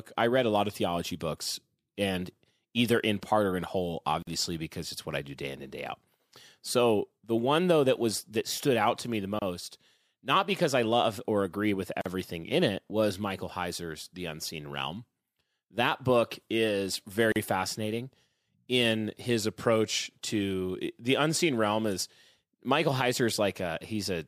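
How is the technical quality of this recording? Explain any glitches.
The speech is broken by four short dropouts, each a gap at a join of encoded pieces: at 4.22 s (47 ms, after "part or in whole"), 9.39 s (28 ms, after "out to me the"), 12.01 s (43 ms, before "in it was") and 17.32 s (38 ms). Separately encoded segments were joined with their encoder start delay and end padding left in, so silence opens abruptly mid-phrase, slightly softened, then speech resumes where it stopped.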